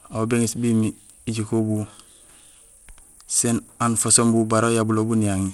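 From start to finish the speech carries plainly audible coding damage: the top end stops cold above about 16.7 kHz, the upper treble flickers in and out, and a gritty granular noise with aliasing clings to the sound. The likely cause is Bluetooth SBC compression at a low bit pool, consistent with roughly 96 kbps, starving the highest sub-bands of bits. Unlike a hearing-model codec such as MP3, SBC uses simple bit allocation with no real hearing model to hide its noise.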